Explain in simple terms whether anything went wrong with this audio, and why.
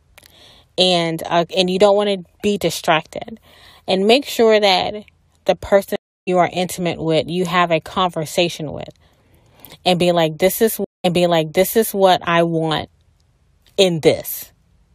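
A stream reconnect happens twice in this speech. At 5.96 s the sound drops out for about 0.31 s, then picks up roughly a fifth of a second further along, so a small piece is skipped. At 10.84 s it goes quiet for about 0.2 s and resumes 0.95 s earlier, so a short stretch plays twice. Each time the connection broke, the player went silent, reconnected, and restarted its decoding mid-stream at a different point.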